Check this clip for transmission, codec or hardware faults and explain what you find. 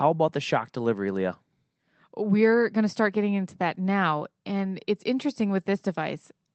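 Nothing stood out on listening to the speech in this recording.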